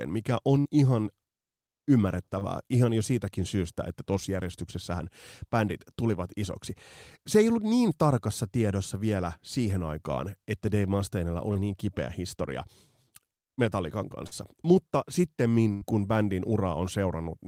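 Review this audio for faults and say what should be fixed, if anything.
Burst of packet loss at 0.59 to 0.67 s and at 15.73 to 15.83 s, just before "kun bändin". About 60 ms and then 80 ms of speech never arrived. The receiver stretched the last sound into a fading buzz or hiss, and the speech then resumes with that stretch missing.

Short concealed packet loss at 2.39 to 2.43 s before "ihan jo siitäkin syystä", at 11.53 to 11.57 s before "niin kipeä historia", and at 14.27 to 14.33 s. Gaps of about 20, 20 and 40 ms were patched by extrapolating the preceding sound, leaving a brief smear or wobble.

To prevent both, give the call a steadier network path and a larger adaptive jitter buffer, and enable forward error correction so that lost packets can be rebuilt rather than guessed.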